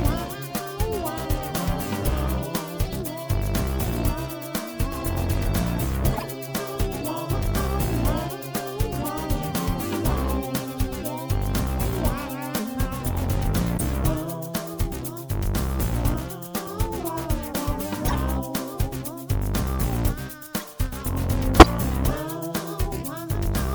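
Corrupt frames decoded at 6.14–6.24, 13.78–13.81, 18.08–18.15, 20.58–20.64 and 21.60–21.66 s: damaged bits misplace energy, so each few-frame stretch yields a chirp, squeak, blip or burst of noise, the last near full scale. Spectrograms show brief vertical smears; waveforms show short spiky bursts.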